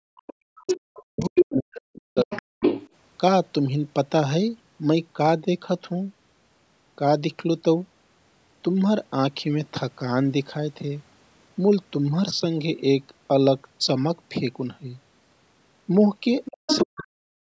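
From 0.15 to 2.56 s the speech is repeatedly pulled down, by as much as roughly 40 dB, in about two seconds of gaps and dips. This is speech suppressed in double talk, likely because an echo canceller clamped the talker along with the far-end echo while both sides spoke. Unlike a network dropout, the cuts track the other voice's activity rather than falling at random.

In and just after that stretch the other side's voice leaks through at 0.67 to 0.79 s, slightly below the talker, at 1.2 to 1.45 s, somewhat louder than the talker, and at 1.96 to 2.89 s, at about equal level. This is likely residual loudspeaker echo the canceller missed. It is a second, separate voice added on top, not the talker's own sound being altered.

Near the end the pattern returns. The other side's voice leaks through from 16.45 to 17.0 s, a little under the talker. Speech suppressed in double talk then follows from 16.5 to 17.39 s, with dips reaching roughly 40 dB across about 0.7 s.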